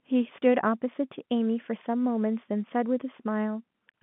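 Nothing stood out on listening to this telephone-band speech.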